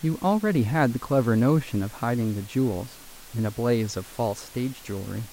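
The speech recording has no technical faults; the only thing beneath it is the room's own background noise, which sits about 22 dB below the speech.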